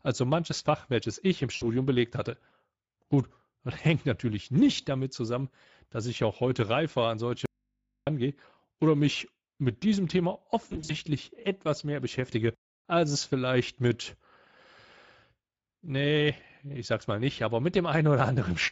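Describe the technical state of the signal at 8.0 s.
At 8.0 s the speech is inside an audio dropout to a faint residue running from 7.46 to 8.07 s, just after "heute reifer an solche". The signal cuts off abruptly for about 0.61 s, leaving only low mains hum roughly 55 dB below the speech level, then returns just as sharply. The likely cause is a break upstream while the downstream input stayed open and picked up hum.

Throughout, including this moment, the Speex codec is audible. Its CELP coding leaves too few bits for the excitation, so the speech sounds hoarse and noisy, with a shaped, noise-like upper band. This points to a mid-quality setting of about 17 kbps.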